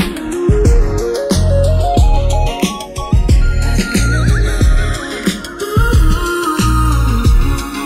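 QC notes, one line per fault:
throughout, channels drifting apart: the two channels run on clocks that disagree by roughly 100 ppm, so the offset between them creeps up to under a millisecond by the end. Summed to mono, the comb notches glide slowly through the spectrum, heard as slow flanging.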